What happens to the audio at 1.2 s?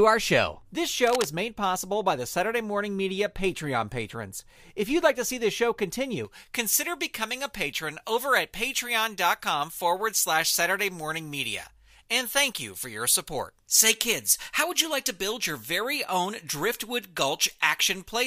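At 1.2 s the speech is overlaid by cable scratch noise, a burst running from about 1.07 to 1.26 s, roughly a fifth of a second. It sounds like a rough, uneven scratching or rustle sitting only slightly below the speech level. The likely cause is a worn cable, connector or control being moved, so its contact resistance fluctuates rapidly and injects dense, irregular noise into the signal for that moment.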